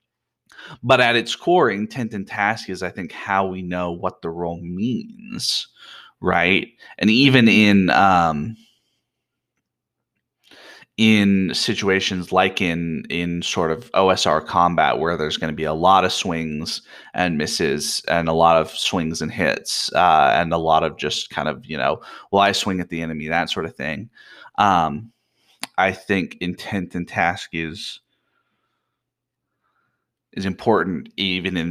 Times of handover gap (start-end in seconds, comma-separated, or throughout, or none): none